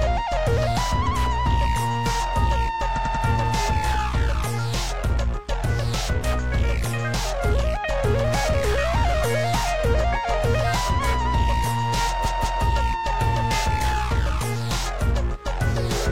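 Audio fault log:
1.03–1.12 s, 2.93–3.21 s, 12.22–12.59 s: repeated frames. A 92.9 ms block of compressed frames replays once, then three times, and finally a 185.8 ms block twice. The result is an audible stutter, which fits duplicated frames of about 46 ms each. Each repeat adds time, lengthening the audio by about 0.74 s in total.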